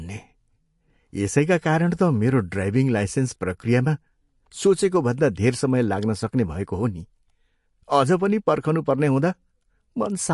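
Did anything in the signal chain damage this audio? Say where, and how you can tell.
Yes. The damage sits at the codec stage, throughout the speech. Nothing remains above 11.3 kHz, a hard treble cut-off. The coding damage is plainly audible. This points to MP3 compression at a low bitrate, likely around 48 kbps, where the encoder discards treble and weak detail.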